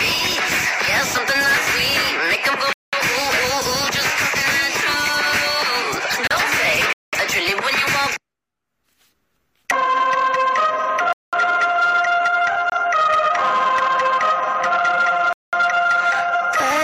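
At 2.73 s the sound stops dead for 200 ms and resumes at 2.93 s. This is a gap between chunks: the audio was delivered in 4 s pieces and silence was inserted at each join, so nothing is lost, but the flow breaks. It recurs at 6.93 to 7.13 s, 11.13 to 11.33 s and 15.33 to 15.53 s. On a waveform each gap is a flat, empty strip. On a spectrogram it is a blank vertical band with sharp edges across all frequencies.

Between those, at 6.27 to 6.31 s, a much shorter hole of about 34 ms appears. It is a gap between stream segments: the time stamps of two segments, roughly 6 s apart, don't meet, and the player pads the difference with silence. A second one, about 23 ms, falls at 12.70 to 12.72 s. These are heard as brief, hard-edged holes that interrupt the sound, and show as thin, hard-edged blank slivers in both views.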